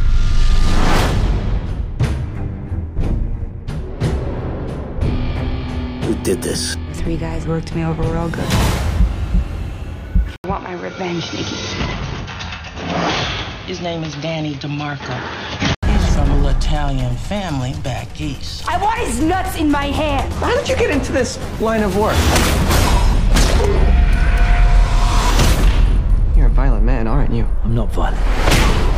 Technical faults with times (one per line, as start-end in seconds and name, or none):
10.36-15.83 input switched to a poorer device